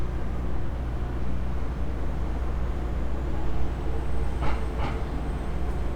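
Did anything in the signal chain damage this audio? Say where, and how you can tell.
No, nothing in this recording of sounds stood out on listening as damage from any stage of the chain.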